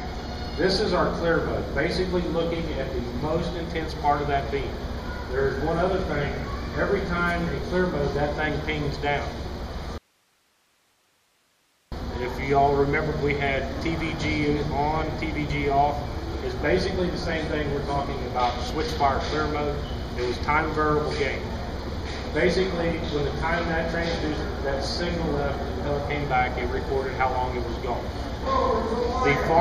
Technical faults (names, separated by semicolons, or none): audio dropout to a faint residue